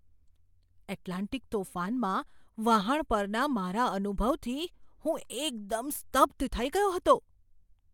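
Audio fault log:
Nothing stood out on listening to this speech recording.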